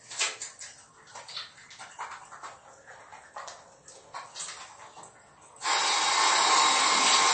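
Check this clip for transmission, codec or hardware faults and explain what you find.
Two faults are audible: a compressed, band-limited sound throughout and a brief drop in speed and pitch partway through.

The whole clip sounds dull and watery, with a swirling, metallic quality and nothing at all above 8.3 kHz. This points to heavy MP3 compression, likely at a low bitrate around 33 kbps. Short of bits, the encoder cuts the treble at a fixed frequency and discards weaker frequency components, which drop in and out from frame to frame and produce the swirl.

From 2.43 s to 4.28 s the audio slows by about 6% and sags in pitch by roughly a semitone (108 cents), then snaps back to normal. This is a drift correction step, likely from clock-matching software that briefly changed the playback rate in one jump to rebalance its buffer. Because speed and pitch move together, the passage sounds detuned and dragged.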